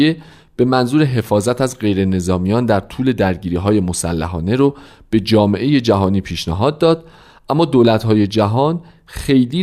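No technical faults can be heard anywhere in this speech recording.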